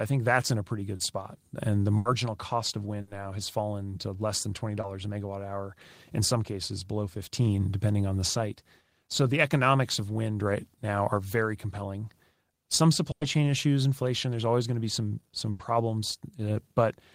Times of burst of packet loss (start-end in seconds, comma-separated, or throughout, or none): 1.97-2.07, 3.01-3.09, 13.11-13.23, 15.51-15.61